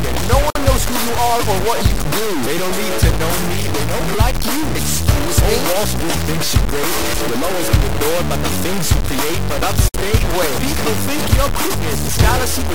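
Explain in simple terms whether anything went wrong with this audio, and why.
Low bit depth without dither runs through the whole clip: the sound is harsh and grainy, and quiet parts sputter or drop out. The likely cause is the audio being stored with very few steps, around 3 bits, cut off roughly, so the errors follow the sound.

Gaps at joins of encoded pieces appear at 0.50 to 0.55 s, about 52 ms, and at 9.88 to 9.94 s, about 59 ms. The audio was encoded in separate pieces, and each piece kept its silent start and padded end when they were stitched together. The sound halts briefly, then resumes where it left off.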